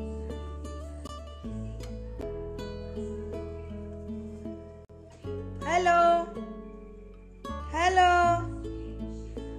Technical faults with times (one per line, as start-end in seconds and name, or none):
1.07 block of digital silence
2.21 block of digital silence
4.85-4.89 block of digital silence